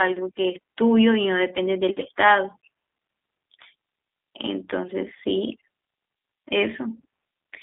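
G.729 codec damage runs through the whole of this speech recording: nothing reaches above 3.8 kHz, the line band sits between 250 Hz and 3.6 kHz, and the voice is plainly rough and synthetic, rebuilt from a vocal tract filter, pitch predictor and sparse pulses, which fits an 8 kbit/s G.729A stream.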